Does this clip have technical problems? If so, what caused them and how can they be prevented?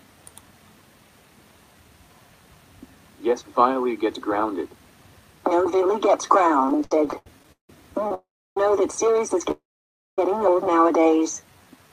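Yes, there are a few, all on the receiving end of a network call.

Repeated stalls (stutter) run from 6.65 to 7.70 s: thirteen small gaps where packets arrived late, the jitter buffer kept running dry, and the receiver stretched the last sound to cover. About 434 ms gets filled that way, the longest hole 169 ms, so roughly 42% of that stretch is concealment and it drags. A larger jitter buffer or a steadier network path would prevent it.

The short stall from a late packet lasts from 8.08 to 8.11 s. One packet missed its slot, so the receiver held the previous sound for about 24 ms, then carried on from the same spot, leaving a brief hold with a faint buzz or dip. Keeping a little more buffer headroom would absorb single late packets like this.

There are two call audio freezes, at 8.14 to 8.57 s and 9.51 to 10.19 s. In each the sound hangs as a fading buzz or hiss and then drops to silence, about 320 ms in the first and about 570 ms in the second, before resuming where it left off. 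The likely cause is packets held up in transit long enough to empty the buffer, adding about 420 and 664 ms of delay. Prioritizing call traffic (QoS) or avoiding congested links would help.

The jitter buffer slow-down runs from 11.23 to 11.89 s. The receiver was rebuilding its reserve by repeating tiny pitch-period slices, adding about 115 ms, so the sound plays at about 84% speed with the same pitch and a slightly drawn-out feel. Fewer stalls upstream would mean the buffer rarely needs to refill like this.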